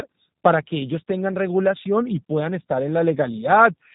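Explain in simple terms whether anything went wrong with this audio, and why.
Yes, something did go wrong: the whole clip has passed through the G.729 codec, a phone-call squeezer that rebuilds speech from a rough model. Nothing above about 3.8 kHz survives, so it sounds muffled, slightly buzzy and a bit robotic throughout.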